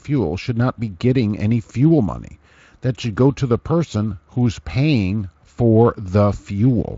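Listening to this speech recording, nothing stood out as a technical problem.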